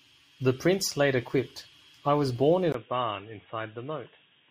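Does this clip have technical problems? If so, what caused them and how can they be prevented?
Yes. At 2.72 s, right after "I was born in", the speech turns dull and boxy through to the end of the clip, with a 20 ms gap at the change. Nothing above 3.8 kHz survives, the level drops by roughly 5 dB, and a new noise floor appears around 45 dB below the speech. This is likely an input switched to a poorer device, a narrower-band microphone or a headset's call profile. To prevent it, lock the recording input to a fixed device and disable automatic switching before recording.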